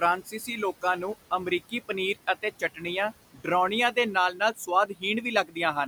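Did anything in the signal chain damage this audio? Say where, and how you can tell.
Yes. Noise suppressor artifacts run through the whole clip, from the call-processing stage. The room noise, about 18 dB under the speech, is pulled down by about 17 dB between phrases and returns beneath them. The suppressor lowers each band it takes for steady noise, frame by frame.

Speech cut by the noise suppressor, also from call processing, occurs at 0.21–0.49 s (just before "ਲੋਕਾਂ ਨੂੰ ਅਮਰੀਕੀ ਪਨੀਰ"), 2.59–2.85 s (after "ਨੂੰ ਅਮਰੀਕੀ ਪਨੀਰ ਅਤੇ"), 3.34–3.47 s, 4.34–4.68 s (after "ਦੇ ਨਾਲ"), 4.87–5.03 s and 5.44–5.57 s. Quiet speech was taken for noise and dropped by about 9 to 17 dB for roughly a tenth of a second, so it sounds swallowed.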